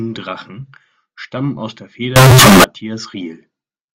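It's a speech clip, and right after "stammen aus der", from 2.16 to 2.64 s, it turns into a loud, harsh, near-square blast at an almost fixed, high level, with background noise as loud as the speech though pitch still tracks. That's likely float read as integer, with 32-bit float samples decoded as 32-bit integers.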